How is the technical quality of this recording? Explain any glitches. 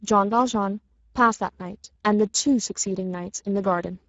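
Technical quality is limited by one fault that runs through the whole recording: Speex codec damage. The speech sounds noisy and hoarse, typical of CELP coding starved of excitation bits. This points to roughly 10 kbps. Nothing reaches above 7.7 kHz, and the top band carries only a shaped, noise-like fill.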